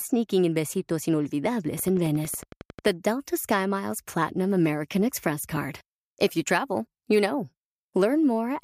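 From 1.79 to 2.89 s the speech carries a train of clicks: about fifteen short, near-identical pops at a steady 11.1 per second, peaking roughly 5 dB above the speech. They are most likely interference from nearby equipment or a faulty connection or power supply injecting a pulse into the signal. They sound like rapid ticking laid over the speech. A spectrogram shows evenly spaced thin vertical broadband lines, and the waveform shows matching sharp spikes at regular intervals.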